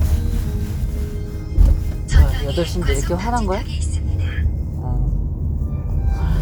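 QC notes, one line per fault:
No faults heard anywhere in the sound; nothing to log.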